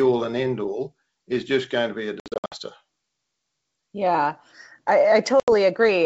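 Speech over a G.722 wideband call, with packet loss on an ADPCM call from 2.20 to 2.56 s, just after "going to be a". Around ten packets (240 ms) drop out in runs of up to 60 ms. A shorter hole follows at 5.40 to 5.49 s, about four packets (80 ms). Unlike plain dropouts, each gap leaves the speech slightly distorted as it returns, because the decoder's predictor and step size lost sync with the sender's.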